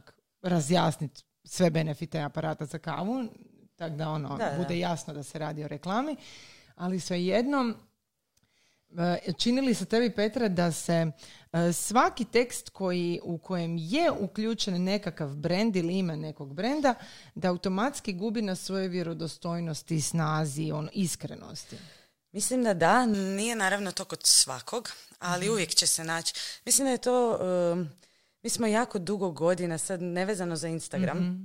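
From 23.14 to 26.78 s, pre-emphasis is left on: the treble boost applied for transmission was never undone by the matching de-emphasis, and the lift fits a J.17 curve. The speech gains about 11 dB at 10 kHz relative to 1 kHz, sounding thin, bright and sharply sibilant.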